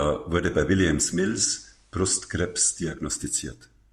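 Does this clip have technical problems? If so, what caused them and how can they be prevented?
Yes. From 0.94 s to 3.12 s the speech goes through digital radio blending to analogue, crossfading over 0.45 s to the FM feed, which drops the level about 2 dB and brings up faint hiss. A stronger digital signal prevents it.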